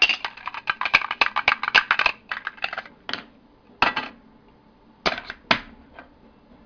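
An everyday sound recording with aliasing throughout. Energy above 5.5 kHz folds back as gritty, unrelated tones, fairly strong against the sound. That points to downsampling from 44.1 kHz to about 11 kHz without filtering.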